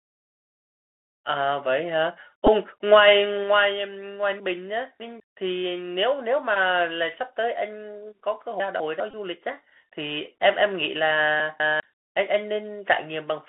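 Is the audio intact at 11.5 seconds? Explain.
No. From 11.4 to 11.8 s, two 200 ms chunks are out of order: one arrived a chunk late and plays after its successor, giving jumbled sound and abrupt waveform discontinuities at the joins. The Bluetooth CVSD headset codec also applies here: slope-tracking one-bit coding leaves granular hiss and scratchy sibilants, with the spectrogram band-limited to about 250 Hz–3.4 kHz.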